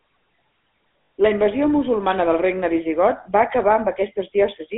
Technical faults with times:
0.00-4.77 GSM full-rate codec
1.02-1.12 lost GSM frames

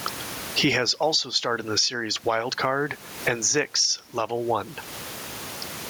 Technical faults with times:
0.00-5.89 gain pumping

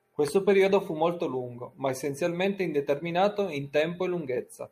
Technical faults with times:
none

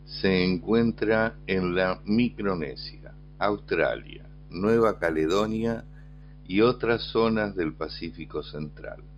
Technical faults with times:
4.67-6.22 imaging from linear upsampling

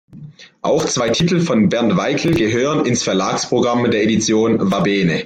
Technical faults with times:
none

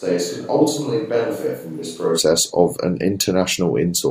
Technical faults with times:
0.00-2.17 switch to a distant microphone

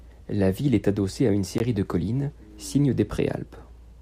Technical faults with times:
1.58 gap between stream segments

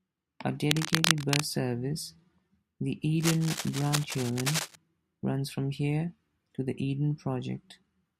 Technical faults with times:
0.71-1.44 cable scratch noise
3.20-4.75 cable scratch noise

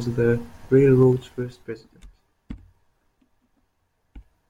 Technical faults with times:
0.98-2.09 zipper noise

